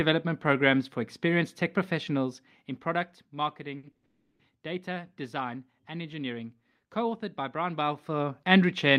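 Speech, broken by three short stalls from a late packet at 3.77–3.85 s, 3.91–3.96 s and 3.96–4.05 s, just before "data design and engineering". Each stretches the last sound for 60, 30 and 70 ms while the receiver waits, so spectrogram frames smear horizontally and the waveform repeats. Then comes a call audio freeze from 4.05 to 4.41 s, most likely packets held up in transit emptying the jitter buffer. About 340 ms of continued sound, a fading buzz with no true silence, shows as flat, blurred harmonics before speech resumes where it stopped.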